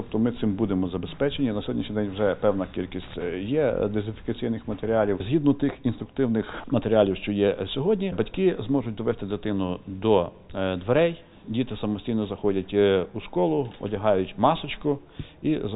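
No technical faults can be heard at any point in the audio.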